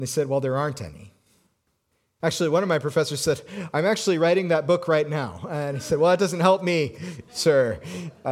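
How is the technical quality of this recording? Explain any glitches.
Nothing here gives me anything to flag: the speech comes across steady and intact, with no glitches to explain.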